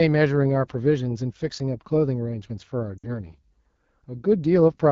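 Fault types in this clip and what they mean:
AMR wideband (HD Voice) codec: the speech sounds rough and raspy throughout, pointing to a low rate near 8.85 kbit/s, unlike narrowband codecs, which lose the airy top entirely.
Lost AMR speech frames: around 2.98 s, about 60 ms of speech is smeared and fades rather than cutting cleanly to silence, which fits roughly three concealed 20 ms frames.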